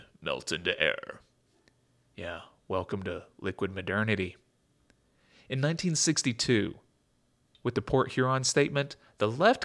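No technical faults can be heard anywhere in the recording. From beginning to end, nothing in the speech stands out as a problem with how the audio was captured, processed or delivered.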